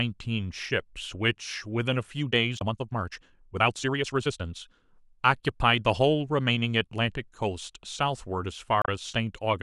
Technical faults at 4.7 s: damaged data in a compressed stream

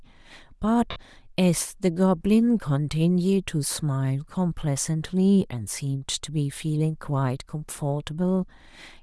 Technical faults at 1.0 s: Bluetooth LC3 compression; lost LE Audio frames

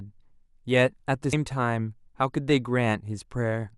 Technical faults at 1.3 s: damaged data in a compressed stream

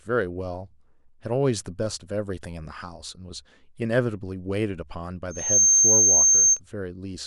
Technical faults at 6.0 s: loudspeaker feedback squeal

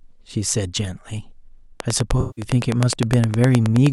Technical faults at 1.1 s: none

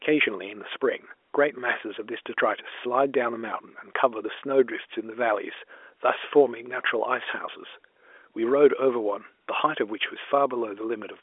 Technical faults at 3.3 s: none

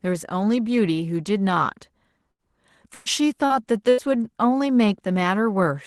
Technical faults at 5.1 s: none

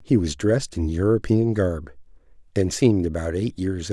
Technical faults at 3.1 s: none

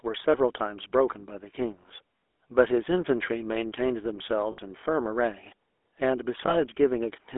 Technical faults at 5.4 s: GSM full-rate codec

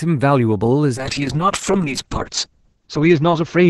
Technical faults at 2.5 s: call bitrate drop

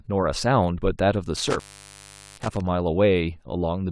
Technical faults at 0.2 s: none

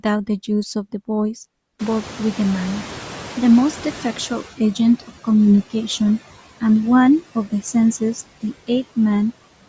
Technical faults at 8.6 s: noise suppressor artifacts

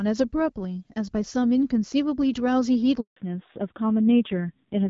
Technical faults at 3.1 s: handover gap; fallback to narrowband

